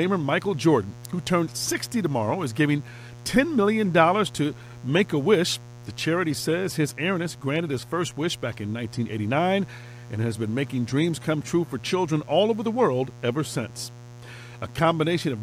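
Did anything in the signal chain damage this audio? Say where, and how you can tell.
Yes. A steady, raspy mains buzz sits under the speech for the whole clip, only about 20 dB below it. The buzz is built on 60 Hz, pointing to the analogue wiring, where a dimmer, rectifier or poor shielding injects sharp spikes twice per cycle, spreading harmonics into the kilohertz range.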